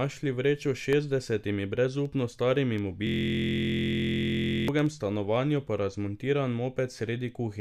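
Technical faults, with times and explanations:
3.07–4.68 s, system hang loop: after "šestdesetimi brezupno starimi" the audio freezes into one 23.2 ms slice repeated about 70 times, which fits a 1024-sample buffer that the hardware kept replaying while the driver stalled. Because the slice is so short, it fuses into a steady buzz at 43.1 Hz rather than a stutter. The exact, unvarying repetition and the resumption at "stanovanju pa razmontiran" set it apart from dropouts, which go silent, and from packet-loss concealment, which varies and fades.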